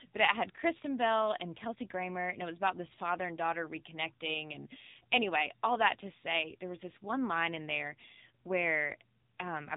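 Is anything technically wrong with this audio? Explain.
Yes. Throughout the speech, the AMR narrowband mobile codec audibly degrades the sound. Nothing passes above 3.8 kHz, so it sounds boxed-in and phone-like. The codec rebuilds the sound from a vocal-tract model driven by a few pulses per 5 ms subframe. Its clearly buzzy, synthetic texture fits a low AMR-NB mode around 7.4 kbps. On a spectrogram, energy stops abruptly at a flat ceiling near 3.8 kHz, and harmonics look smeared in 20 ms blocks.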